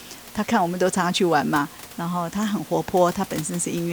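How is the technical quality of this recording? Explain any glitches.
No technical faults are audible.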